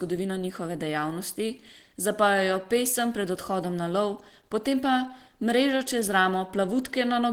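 Throughout, the speech sounds hoarse and grainy, likely from Opus compression in hybrid mode near 16 kbps. Unlike MP3, it roughens rather than swirls.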